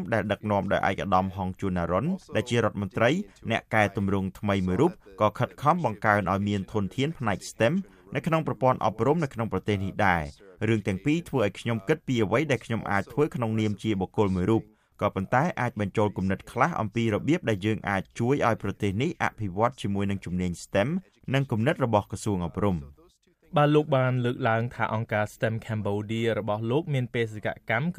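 No technical faults can be heard anywhere in the audio. Nothing in it calls for comment from an engineering standpoint.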